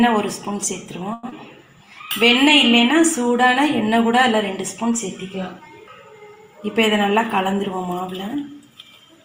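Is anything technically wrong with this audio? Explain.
Yes, there are four timing faults from jitter buffer trouble.

From 1.13 to 1.25 s the sound hangs for about 100 ms, held too long with a faint buzz or dip, then resumes where it left off. This is a short stall from a late packet: the jitter buffer emptied, so the receiver stretched the last sound until the packet arrived, and nothing was lost.

At 1.3 s the audio lurches forward, with roughly 70 ms missing and the two sides joined by a brief 20 ms bridge. This skip ahead happened while later audio was already queued: a stretch was dropped, either on the way or by the jitter buffer when it overflowed.

From 1.78 to 2.44 s the sound slows to 95% speed at unchanged pitch, drawn out. This jitter buffer slow-down added 40 ms by repeating single pitch periods or bits of pauses to rebuild a reserve.

From 7.53 to 8.36 s the sound rushes at 110% speed, pitch unchanged, feeling hurried. 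In this jitter buffer speed-up the receiver cut about a tenth of a second in many small pieces to shed excess delay.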